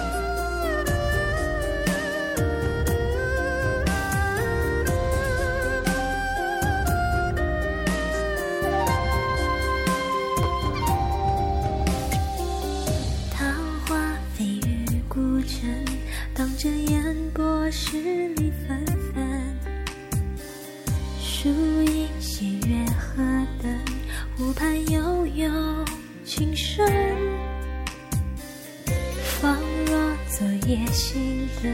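Chunks out of order at 10.43–10.45 s: one 10.7 ms chunk plays a chunk late, producing a brief jumbled moment, unlike a dropout, since no audio goes missing.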